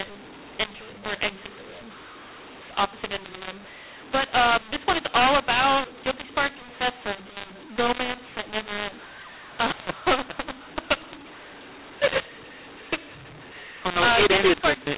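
A mu-law and A-law mix-up runs through the whole clip: the speech was encoded with the A-law curve of G.711 but decoded as though it were mu-law. The two laws divide the 8-bit codes differently, so levels come back scrambled, with some samples too loud, others too quiet, and the softest ones pushed well above silence. The speech sounds harsh and gritty, pauses fill with hiss, and everything stays capped below 4 kHz, which fits 8 kHz telephone sampling.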